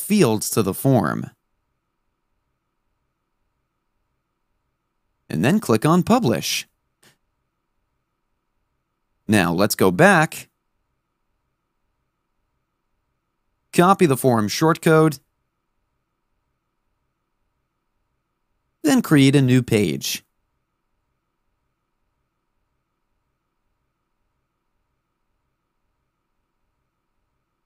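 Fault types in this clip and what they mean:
No technical faults can be heard anywhere in the signal, with no dropouts, distortion, or level and timing disturbances.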